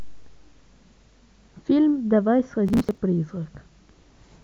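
From 2.67 to 2.98 s, the speech breaks into processor overload crackle. For about 0.3 s the processor falls behind and misses its buffer deadlines again and again. Each missed buffer is skipped, so the audio jumps ahead with a hard edge. The tiny jumps sound spaced a few milliseconds apart, which fits buffers of around 5 ms. Dozens of them pile up into a gritty, tearing crackle over the speech. It stops once the load clears.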